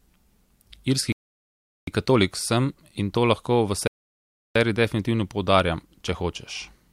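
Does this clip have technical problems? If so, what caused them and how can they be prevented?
Yes. The player's buffer ran empty twice, a rebuffering stall, halting playback until more data arrived. The sound drops to silence from 1.12 to 1.88 s, resuming at "katolik sem in to", and from 3.87 to 4.55 s, between "in to lahko v" and "seriji definitivno poudarjam". Nothing is skipped, but 0.75 s and 0.68 s are added. A larger pre-roll buffer or adaptive bitrate switching on slow connections prevents this.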